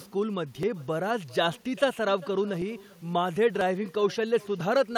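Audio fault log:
throughout: echo with no canceller. The far end is playing the call through a loudspeaker, and its microphone is capturing that output, with no echo canceller removing it before it returns. The speech comes back as a second copy about 400 ms late and about 24 dB below the direct sound. Because it passed through a speaker, a room and a microphone, that trailing copy sounds thinner, shadowing each phrase just after it is spoken.
0.63 s, 2.62 s, 3.61 s, 4.61 s: audio missing between chunks. The capture or processing is likely working in one-second blocks and dropping a tiny slice, only a few milliseconds, at each handover. The audio on either side is butted together with no filler, so the sound jumps forward abruptly at these points. The gaps fall at one-second spacing or a whole multiple of it, which points to a fixed block boundary rather than random loss.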